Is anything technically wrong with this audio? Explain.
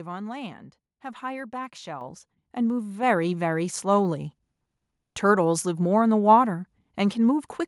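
Yes. At 2.01 s the microphone volume is stepped up by about 7 dB. The call software judged the input too quiet and raised the device gain in a single jump. The speech and the background noise get louder together, abruptly, with no fade.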